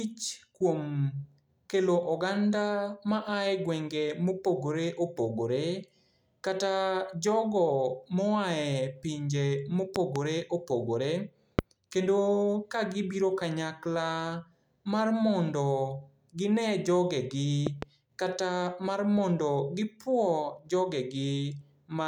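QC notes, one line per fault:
9.96–10.18 s, 11.59–11.61 s and 17.67–17.85 s (between "ginee jogegi" and "kata mar mondo"): loud pop. Sharp thumps rise about 15 to 20 dB above the speech: a double pop, a single, then another double. They are likely voltage pulses from a plug, switch or static. On the waveform they show as tall narrow spikes, and on the spectrogram as full-height vertical lines over the continuing speech.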